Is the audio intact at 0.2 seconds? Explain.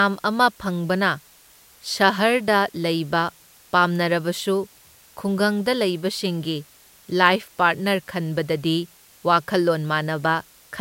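No. At 0.2 seconds the speech carries low bit depth with dither, present across the whole clip. The signal is held to about 9 bits, and dither added before rounding turns the quantization error into a steady, even hiss about 30 dB below the signal, without distortion.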